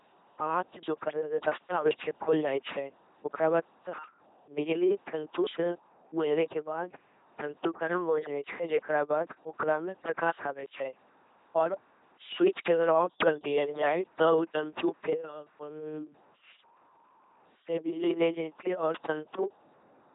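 Throughout, the speech has been coded by an LPC-10 vocoder at a rate that fits 2.4 kbit/s. It rebuilds each moment from a small filter fed by either pulses or noise, leaving a heavily damaged, buzzing robotic voice with nothing above 3.8 kHz.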